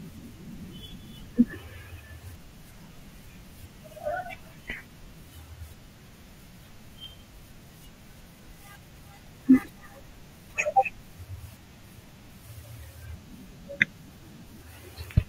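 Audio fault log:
7.04 s and 9.27 s, repeated buffer: both times new audio arrived late, so the device replayed its last block, which is about 1.33 ms long and fits a 64-sample buffer. That block plays twice at 7.04 s and three times at 9.27 s, each with a hard join. Because the block is so short, you hear a tick or a tiny buzz rather than a stutter, and a few milliseconds of speech go missing.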